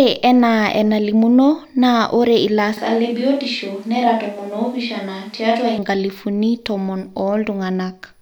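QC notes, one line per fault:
2.77–5.78 s, switch to a distant microphone: the close mic likely drops out for a farther one, so speech abruptly turns roomy, thin, about 5 dB quieter and noisier.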